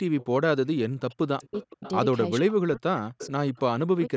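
At 0.2 to 0.26 s, a likely echo leak from a loudspeaker-side canceller sends back a faint copy of the speech about 439 ms late, roughly 25 dB below it, heard as a brief ghostly scrap. From 0.86 to 1.85 s, speech is suppressed in double talk, likely because the canceller could not separate the talker from the far end's echo and turned both down, so the speech dips by as much as around 40 dB for about a second. Overlapping this, from 1.42 to 1.92 s, another likely echo leak returns the speech 474 ms late at roughly 20 dB down, a delayed shadow. From 2.4 to 3.54 s, the same likely double-talk suppression again pulls the speech down by up to about 40 dB for about a second. Within that stretch, at 3.18 to 3.27 s, a stronger likely echo leak comes back 474 ms late, only about 15 dB below the speech. Finally, from 3.9 to 4.11 s, a short burst of double-talk suppression, likely from the canceller again, drops the speech by around 40 dB for about a tenth of a second.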